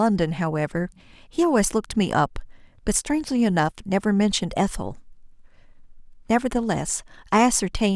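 No technical faults occur at any point in this speech recording.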